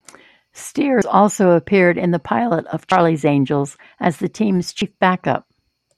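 At 1.02, 2.92 and 4.82 s the speech skips forward, with about a tenth of a second gone each time and the two sides butted straight together, no gap of silence. That's audio missing between chunks. The regular spacing points to a recorder or processor likely working in 2-second blocks and dropping a sliver while it closes one block and opens the next, so each join chops a bit out of the speech.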